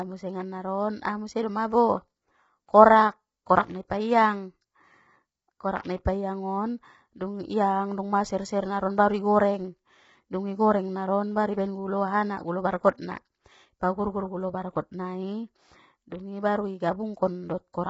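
Speech with heavy low-delay AAC compression throughout: short frames blur the pitch harmonics into grainy noise and nothing survives above 7.7 kHz, likely AAC-ELD near 16 kbps, not band-limited telephone audio.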